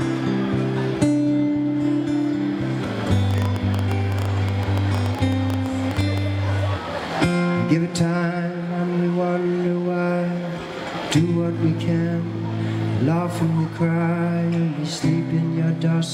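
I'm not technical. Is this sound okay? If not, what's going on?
No, not quite. From about 3.31 to 6.19 seconds there's a train of clicks: roughly thirty sharp little pops, close to ten a second, landing at an uneven, stuttering pace rather than a steady tick. They stick out well above the sound itself, so they're hard to miss. Something was likely injecting short pulses into the signal during that stretch, such as electrical interference from nearby gear or a faulty connection or power supply.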